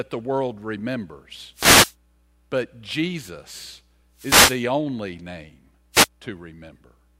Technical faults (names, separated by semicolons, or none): wireless microphone noise hit